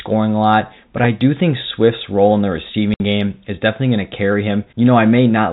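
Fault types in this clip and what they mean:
Packet loss filled with silence: the speech drops out completely from 2.94 to 3.00 s, a 60 ms hole consistent with two lost 30 ms packets. The receiver substituted silence, so the gap has abrupt edges against the band-limited telephone-quality audio.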